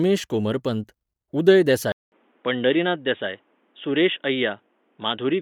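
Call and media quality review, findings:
Bluetooth LC3 compression, whole clip. Plainly audible codec damage: grainy, breathy edge on the speech. Band still reaches about 20.3 kHz. Likely cause: LC3 transform coding in 10 ms frames, at a rate that fits roughly 48 kbps. Sparse upper spectral detail gets zeroed and replaced with noise fill, hence the grain.

Input switched to a poorer device at 1.92 s. Silence of 200 ms, then dull, boxy speech to the end. Nothing above 3.8 kHz after the switch. New background noise sits roughly 40 dB under the signal. Level barely changes. Likely cause: the system dropped to a narrower-band microphone or headset call profile mid-recording.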